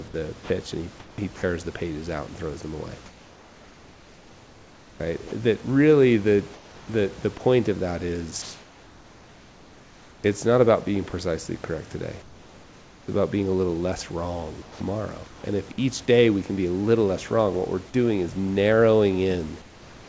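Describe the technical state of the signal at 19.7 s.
At 19.7 s the room background is replaced by comfort noise from 19.62 s to 20.09 s: a steady, featureless hiss about 3 dB quieter, likely from discontinuous transmission.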